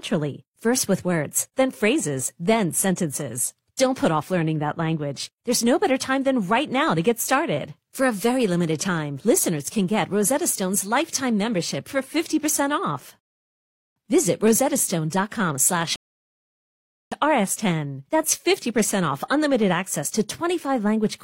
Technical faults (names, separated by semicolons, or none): rebuffering stall